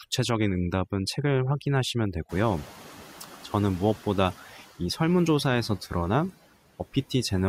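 From 0 to 5.01 s, overdone noise removal strips bands sitting near the noise floor, leaving twinkling near-silence, unlike a gate, which mutes everything at once. When the room noise jumps by about 21 dB around two and a half seconds, the noise suppressor catching up lets it through from 2.29 to 4.34 s. It then sinks by about 6 dB over roughly two seconds, a gradual fade rather than the instant drop of a gate.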